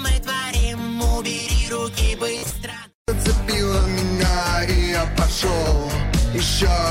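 At 2.38 s a Bluetooth stutter begins and lasts until 2.55 s. Packets arrived late or not at all, so the receiver replayed its last chunk. Short repeated slices buzz over about 120 ms, with the longest gap near 46 ms. The sound then jumps ahead.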